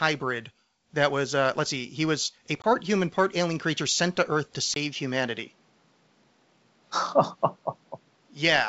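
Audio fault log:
2.62 s, packet loss on an ADPCM call: a 20 ms hard-edged hole, about one packet's worth, replaced by silence. The decoder's adaptive predictor and step size drift from the sender's, so speech resumes with brief distortion before settling.
4.74 to 8.68 s, input switched to a poorer device: after a 20 ms silence the sound turns duller, with nothing above 6.7 kHz and a new noise floor roughly 40 dB below the speech, level unchanged. A change of microphone is the likely cause.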